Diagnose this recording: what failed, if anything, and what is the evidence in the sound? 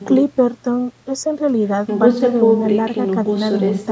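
Nothing failed in this recording: the speech shows the normal signature of call microphone processing, with the lowest bass removed by its high-pass filter and no content above 8 kHz, and nothing in the sound points to a failure at any stage.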